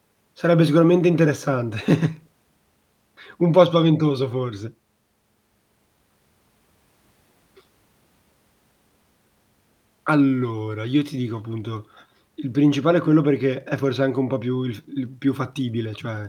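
No technical faults detected.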